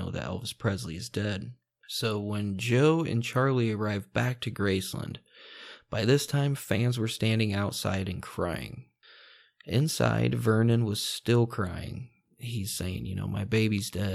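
A speech recording, and nothing is technically wrong with it.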